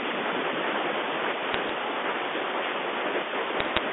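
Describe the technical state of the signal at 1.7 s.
At 1.7 s the signal is just leaving a burst of bit errors on a digital phone line that runs from about 1.52 to 1.70 s. Bits flipped in the G.711 stream each corrupt a single sample, and hits on the sign or upper bits jump that sample far from its neighbours, giving sharp isolated ticks that build into crackle. The rate sounds low, a small fraction of a percent. Unlike packet loss, nothing drops out: the band-limited telephone speech carries on unchanged beneath the clicks.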